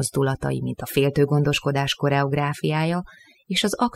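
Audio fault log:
throughout: overdone noise removal. A noise reduction stage set too aggressively keeps pulling individual frequency bands far down or shutting them off wherever they sit close to its noise estimate. The background falls away but breaks into twinkling, warbling specks, and quiet parts of the speech are cut along with it. Unlike a noise gate, which mutes the whole signal at once, the damage here is scattered across frequency, band by band.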